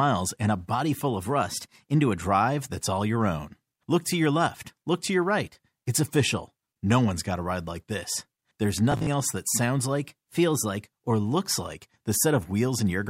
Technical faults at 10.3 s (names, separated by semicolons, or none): drift correction step